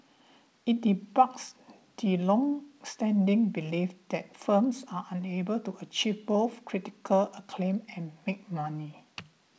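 No technical faults can be heard in the speech, which has the ordinary sound of a call path that band-limits it to nothing above 8 kHz, consistent with a wideband codec such as G.722.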